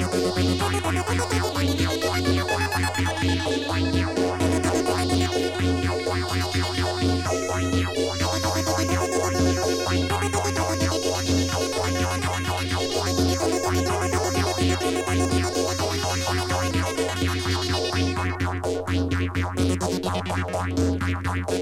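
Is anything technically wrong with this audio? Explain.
No, nothing in this recording points to a technical problem with the signal.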